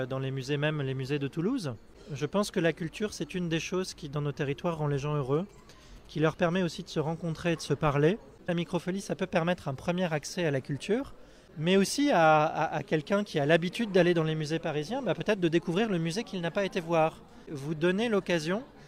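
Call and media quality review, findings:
Galloping dit-dit-dit of short buzzes at 217 Hz, 5.35–7.01 s, about 30 dB below the audio. GSM signalling bursts from a nearby 2G phone, rectified in the audio circuit.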